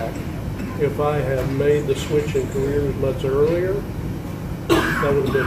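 No technical faults are audible.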